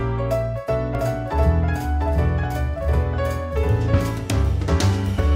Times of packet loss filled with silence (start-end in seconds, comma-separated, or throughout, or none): none